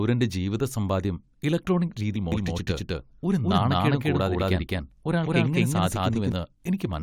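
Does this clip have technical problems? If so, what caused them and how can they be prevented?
Yes. At 2.15 s, just after "ജീവിതസമ്പാദ്യം ഇലക്ട്രോണിക്", there is a brief glitch from damaged data in a compressed stream. Corrupted frames make the decoder lose sync and skip ahead to the next valid header. Checksummed transfer and error-resilient containers prevent this.

From 2.32 s to 6.32 s, a doubled audio track appears. A full-band copy, about as loud as the original, trails by roughly a fifth of a second with no reverberant colour, and it starts and stops abruptly. The likely cause is a second, slower capture path or an edit that left two offset copies. Monitoring only one input route and checking edits for overlapping regions prevents it.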